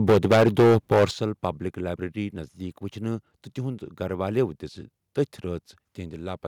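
From 0.08 to 1.05 s the speech is harsh and crackly. The loudest syllables break up with a gritty, splattering edge. This is microphone overload. The input level was likely set far too high, driving peaks about 12 dB past the converter's ceiling. Their tops are flattened. Roughly a fifth of the samples in this stretch are clipped, so the distortion is dense.

At 0.1 s the whole signal drops by about 3 dB in one abrupt step. At 1.11 s it falls again, this time by about 10 dB, just after the distorted stretch ends. The voice and background sink together. These are microphone volume step-downs. The call software likely saw the clipping and cut the device's input gain in discrete jumps.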